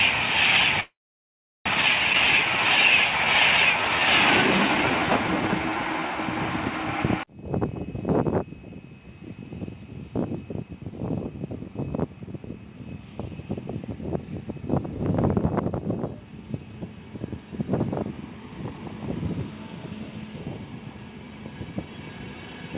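From 0.80 to 1.69 s a call audio freeze stops the sound, which trails off and then sits silent for about 0.73 s. It then resumes exactly where it left off, which is what separates it from a skip. The likely cause is delayed packets draining the jitter buffer.

At 2.14–2.17 s a skip ahead jumps forward almost seamlessly, dropping roughly 0.4 s of audio. The join is abrupt and there is no audible gap, unlike the freeze.

From 2.25 to 6.09 s a jitter buffer slow-down stretches playback to 91% speed at unchanged pitch, repeating pitch periods to add 363 ms. The sound is drawn out rather than interrupted.

From 21.64 s to the end a jitter buffer speed-up trims short pitch-period pieces, about 0.15 s in total. Playback runs at 111% and sounds hurried, with the pitch unchanged, unlike a skip's single jump.

All of this passes through a G.711 A-law call path at 64 kbps, with nothing above 4 kHz.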